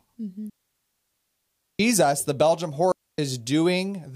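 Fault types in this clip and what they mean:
Digital wireless dropout: the speech drops into clean near-silence twice, for 1.3 s from 0.50 s and for about 0.27 s from 2.92 s, with no noise burst either side, because the receiver lost too much data and quickly faded itself to mute.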